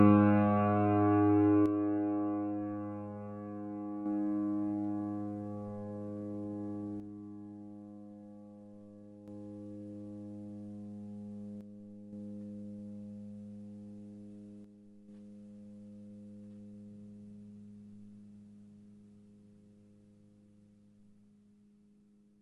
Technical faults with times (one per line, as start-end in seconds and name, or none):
1.66-4.06 one channel drops out
7.00-9.28 one channel drops out
11.61-12.13 one channel drops out
14.64-15.08 one channel drops out